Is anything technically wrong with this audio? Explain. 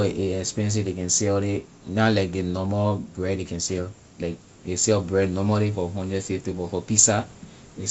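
No, nothing is technically wrong with this audio.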